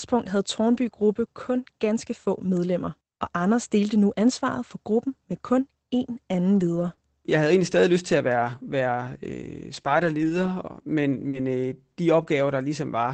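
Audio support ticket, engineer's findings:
0.73–0.83 s: lost packet rebuilt from error correction. No gap, but a short patch of speech sounds rougher and noisier. Probable component: Opus decoder using in-band FEC. About 60 ms was rebuilt from the low-bitrate copy carried in the following packet, which fits three lost 20 ms packets. The copy holds less detail than the original frames, so the patch sounds coarser.

3.85–12.23 s: scattered short gaps. Around three brief ticks or smears, the longest about 40 ms, about 1% of the span. Probable component: jitter buffer concealment. Isolated packets arrived lost or late. The receiver extended the preceding sound across each hole, so the audio stays clear apart from momentary hiccups. The Opus stream at 24 kbps is band-limited to 8 kHz.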